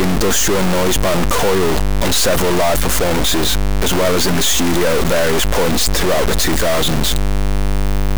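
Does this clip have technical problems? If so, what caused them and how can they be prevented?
Yes, two faults run through the whole recording. The first is mains hum: a steady low tone at 50 Hz with a few low harmonics, sitting roughly 20 dB below the speech. It comes from a ground loop or a nearby transformer leaking the power line into the signal. Unlike rumble or wind noise, it holds a fixed pitch and level and stays audible in the pauses. Breaking the ground loop with balanced cabling or an isolator, and keeping leads away from transformers, prevents it.

The second is harsh, buzzy distortion on the speech, with a gritty noise that also fills the pauses. This is likely a stuck bit, where one data bit stays fixed at 0 or 1 because of a broken data line or converter fault. About half the samples are then pushed off by a large step, around -10 dBFS. Small values near silence flip that bit as their sign changes, which is why the gaps fill with noise. 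Clipping distortion only appears on loud peaks and leaves the pauses clean. Checking converter and interface wiring, and testing the chain with a quiet signal before recording, catches it.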